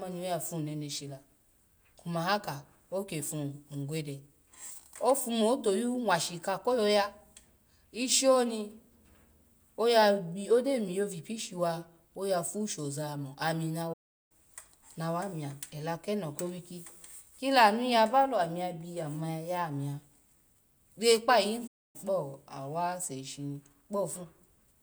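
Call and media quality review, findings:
Playback stall at 13.93 s, after "shoza mo ami na": speech cuts out mid-flow for 0.37 s, then resumes. Waveform drops to a near-flat line. Spectrogram shows a blank full-band column with hard edges.

Playback stall at 21.67 s, after "re kpa ayin": the same dead gap, 0.27 s, with an abrupt restart.

Both likely a player-side buffer underrun or a blocked audio thread, with output starved until data returned.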